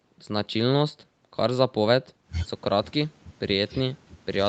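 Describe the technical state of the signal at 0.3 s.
At 0.3 s the speech signal is intact, with no fault present, only the ordinary call-path bandwidth that runs out at about 8 kHz.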